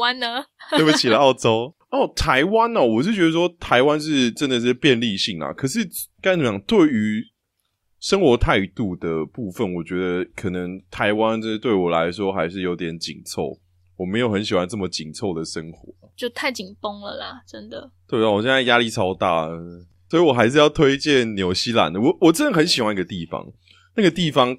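No technical faults occur at any point in the recording, so there is nothing to describe in time order.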